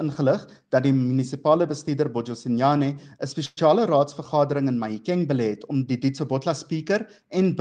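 At 3.45 s the audio stalls in a call audio freeze lasting until 3.59 s. The last sound is held and stretched into a brief buzzy tail for about 117 ms, then drops to near silence for about 10 ms. Playback then resumes exactly where it stopped. Nothing is skipped. Instead the rest of the clip runs about 117 ms later than before. The likely cause is delayed packets draining the jitter buffer.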